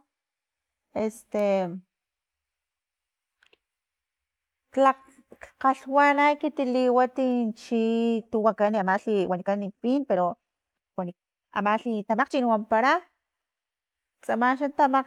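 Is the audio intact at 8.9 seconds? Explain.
No, 8.9 seconds sits inside a time-stretched section running from 8.29 to 12.41 s, where the speech plays at double speed with the pitch unchanged. It's likely software squeezed it to fit a length by dropping short chunks, so it sounds rushed.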